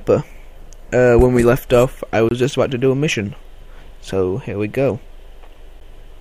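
At about 2.29 to 2.31 s the sound drops to silence for roughly 23 ms, then comes back. At 5.80 s there's a second, shorter gap of about 10 ms. Both are most likely a Bluetooth stall: interference held up packets, the headphone buffer ran empty, and playback paused until the retransmitted packets arrived. You hear a clean cut to nothing and a restart, either exactly where it stopped or a touch further on.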